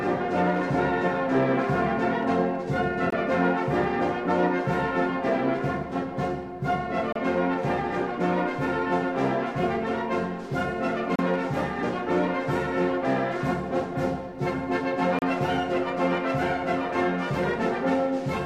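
You'll hear short dropouts in the sound at regular intervals: 3.10–3.12 s, 7.12–7.16 s, 11.16–11.19 s and 15.19–15.22 s, about every 4 s. That's a gap at a join of encoded pieces. The audio was encoded in chunks and stitched back together without trimming, so each encoder's start-up delay and final-frame padding are left in as silence. Here that's about 20 ms at the first join and 32 ms at the rest. The edges are smeared, and the sound then resumes right where it stopped.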